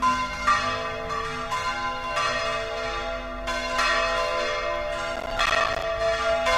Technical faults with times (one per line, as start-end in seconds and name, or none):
5.16-5.83 processor overload crackle